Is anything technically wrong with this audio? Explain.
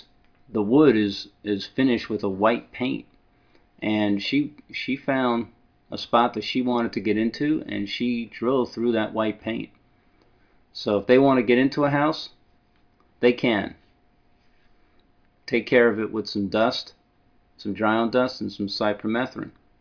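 No, there is no technical fault to point to anywhere in this audio.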